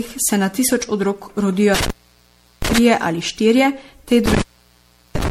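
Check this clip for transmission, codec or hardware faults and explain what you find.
Two faults are present: repeated lossy coding across the whole speech clip, and two dropouts from intermittent contact.

Generation loss, throughout: the audio was likely run through MP3 coding many times, around seven passes on shifting frame grids, which fits a 64 kbit/s chain. Quantisation noise and spectral holes pile up, leaving a swirly, hollow, smeared sound with softened attacks and nothing above 16.5 kHz.

Intermittent contact, from 1.74 to 2.78 s and from 4.26 to 5.30 s: a loose connection breaks the signal path. The first dropout falls after "se na tisoč otrok" and before "ali štirje". In each, the sound crackles at the edges and then cuts out for about 0.72 to 0.73 s, with only faint hiss remaining while the line is open.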